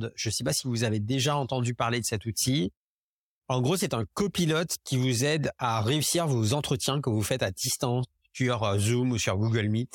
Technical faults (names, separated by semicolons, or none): none